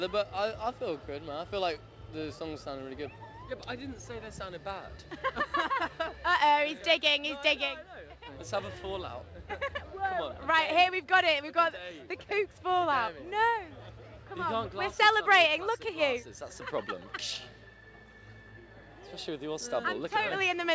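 No faults are audible anywhere in this recording.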